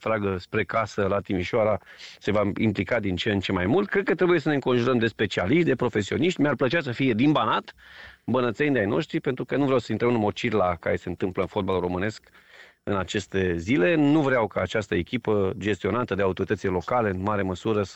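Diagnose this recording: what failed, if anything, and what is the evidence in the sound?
Nothing in the signal chain shows a fault here, from capture through conversion and transmission to playback.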